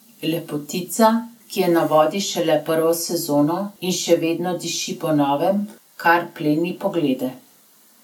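No technical faults can be heard anywhere in the recording; the speech signal stays intact and continuous, with no audible disturbance introduced along its path.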